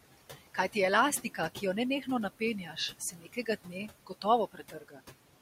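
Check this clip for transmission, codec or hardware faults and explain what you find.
The speech in this clip shows two problems, both from the noise suppressor rather than from transmission, codec or hardware.

Noise suppressor artifacts run through the whole clip. The suppressor pulls down bands it judges to be steady noise by about 17 dB, frame by frame. The room noise, sitting about 15 dB under the speech, drops away in pauses and swells back beneath the voice. On a spectrogram the noise floor looks blotchy and patchy between words rather than an even haze.

Speech cut by the noise suppressor occurs between 1.23 and 1.62 s, and again between 2.39 and 5.01 s. The suppressor mistook quiet parts of the speech for noise and attenuated them along with the background. The first stretch loses about a tenth of a second in total, dipping by up to about 11 dB. The second loses roughly a second spread across that span, with drops reaching about 19 dB. 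The affected speech sounds swallowed or faint. The waveform shows abrupt dips in the envelope, and the spectrogram shows speech detail fading out where it is cut.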